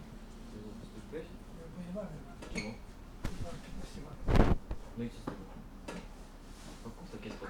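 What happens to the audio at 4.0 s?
At 3.97 s, just before 4.0 s, compressed frames are skipped: roughly one frame, about 20 ms of audio, is never played, so the sound jumps ahead. The join where playback resumes is a brief glitch. On a spectrogram it is a narrow vertical mark, and on the waveform a discontinuity.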